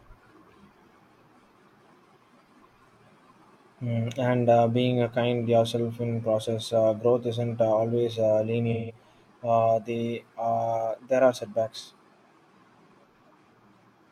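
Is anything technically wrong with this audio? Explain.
Yes, there is AAC frame loss with concealment. Between 8.71 and 8.95 s the decoder stopped receiving AAC frames for about 170 ms, which fits four consecutive frames. It filled the gap by reusing the last good spectrum with altered phase, so the speech turns briefly smeared and phasey. From 11.81 to 11.90 s a shorter loss of about 43 ms, consistent with one frame, produces a quicker noisy blur.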